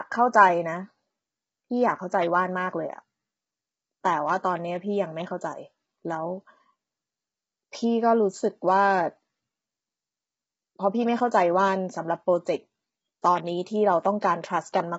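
From start to finish, the speech has a rough, grainy texture. A noise sits between the voice's harmonics. Nothing is heard above 7.8 kHz, so the top of the voice is missing. The likely cause is low-delay AAC compression of the kind used for video calls. Its short frames resolve pitch harmonics poorly. Heavy damage like this points to a low bitrate, around 16 kbps.

At 14.21 s there is a brief pre-echo. A sharp attack lands late in a codec block. The noise sized for that loud attack spreads back over the quiet moment before it. About 13 ms of hiss comes just ahead of the onset. The attack itself sounds softened and smeared rather than crisp.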